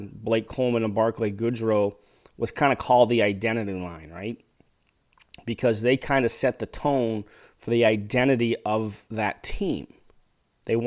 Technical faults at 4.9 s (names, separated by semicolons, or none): none